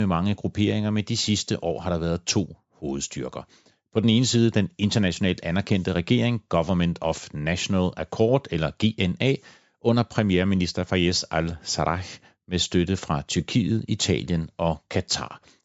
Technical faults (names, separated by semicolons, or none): none